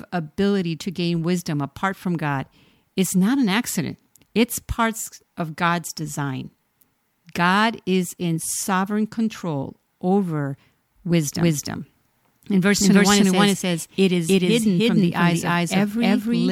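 From about 11.36 s right through to the end, the speech picks up a doubled audio track: a second full-band copy lands around 300 ms behind, at roughly the same level as the original. It kicks in abruptly and has no decay or room tone, so it reads as a flat slapback rather than an echo. Most likely a second, slower capture path got mixed in, or an edit left two copies out of step.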